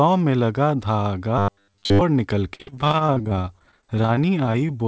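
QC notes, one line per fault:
1.38–2.01 s, robotic sound from repeated short buffers: new audio likely arrived too seldom, so playback looped the last few milliseconds for most of this stretch while real audio was dropped. The loops impose a rigid metallic buzz near 100 Hz, which fits roughly 10 ms buffers.
2.54–4.70 s, repeated packet loss (robotic sound): dozens of packets went missing in quick succession, each hole patched by extending the previous sound, with gaps up to 46 ms and about 22% of the span concealed. The sound turns choppy and robotic, with pieces missing, over the band-limited call audio that stops at 8 kHz.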